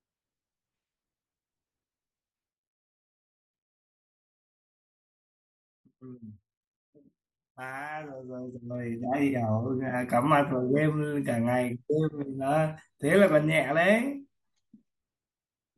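From 8.11 to 9.09 s, zipper noise: the speech level shifts roughly 20 dB in unsmoothed 1 dB steps, about twenty per second, each step ticking audibly.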